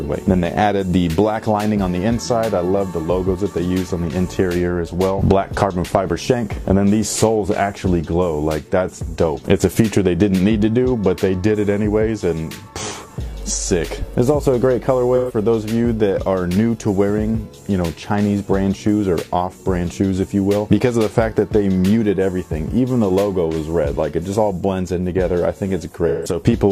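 Brief smeared, noisy or phasey patches break the audio at 15.16 to 15.35 s and 26.08 to 26.36 s. This is AAC frame loss with concealment: the decoder patched about 128 ms and 171 ms of missing frames from the last good spectrum.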